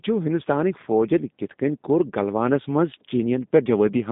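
G.729 codec damage runs throughout. The speech is rebuilt from a vocal tract model at a rate that fits 8 kbit/s, so it sounds rough and synthetic, with nothing above 3.8 kHz.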